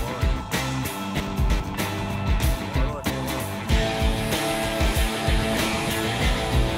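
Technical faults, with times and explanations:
1.2–1.6 s and 3.1–3.4 s, chunks out of order: a 100 ms block arrives late and plays after the blocks that should follow it, three blocks late in the first span and two in the second. The sound jumbles briefly across the three hard joins. Unlike a dropout, nothing goes missing. Unlike a repeat or stutter, nothing plays twice. The total timing holds, so the sound rejoins the right place after each span.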